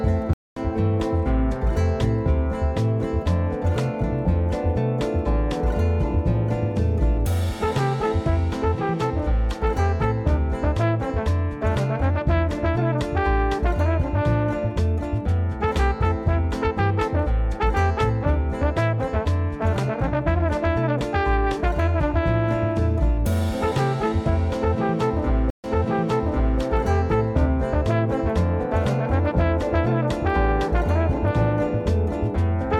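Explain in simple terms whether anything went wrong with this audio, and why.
Twice the sound cuts out briefly and jumps. At 0.33 to 0.60 s it goes silent for about 0.23 s and resumes roughly 0.3 s further on. At 25.50 to 26.60 s a 0.14 s gap is followed by a replay of the last 0.96 s. Both are a stream reconnect: the connection dropped, the player restarted partway through, and the server resent audio the second time.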